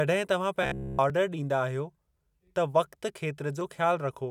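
From 0.63 to 0.99 s the speech turns into a rigid, metallic buzz at about 66.7 Hz. That's the robotic sound from repeated short buffers: new audio likely wasn't arriving in time, so a roughly 15 ms slice got looped over the whole stretch. At 1.10 s and again at 3.61 s there's a small jump in the sound, a dropped buffer (overrun). Around 5 ms of audio was likely overwritten before it was read, and the two sides are butted straight together with no gap.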